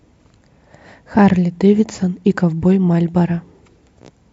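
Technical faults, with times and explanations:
Nothing technical stands out in this bit of speech; there's no fault here to point to.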